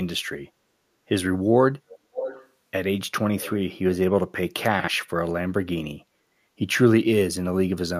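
A speech recording with three kinds of fault. The first is an echo leak. From 1.88 to 2.49 s, a delayed copy of the speech sits under the talker. It trails by 0.58 s. It sits roughly 10 dB below the direct speech. A shorter, fainter scrap returns from 3.40 to 3.53 s, at the same delay and somewhat quieter. The likely cause is a loudspeaker at the far end whose echo canceller missed part of what its microphone picked up. That leftover was sent back down the line. Next come chunks out of order, at 4.80 to 4.88 s. A short piece of audio plays one slot later than it should. It lands after the piece that belongs behind it. Nothing goes missing, but the sequence is scrambled. The hard joins give a brief jumbled stutter. The spacing fits audio handled in 40 ms chunks, one of them written late. Last, the background is gated by the echo canceller from 6.06 to 6.33 s. The room tone dips by about 6 dB for roughly a third of a second. 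The canceller pulled the microphone down while the loudspeaker was active. The ambience then comes back once it releases.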